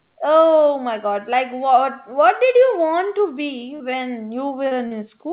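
Right after "want to be", at 3.76 s, there's a short concealed packet loss: about 40 ms of audio never arrived in time, and the receiver bridged it by stretching the preceding sound before blending back in. The same thing happens twice more, at 4.68 s and 4.87 s. Each one comes across as a quick smear or wobble. The band stops at 4 kHz, which fits a narrowband G.711-style call path.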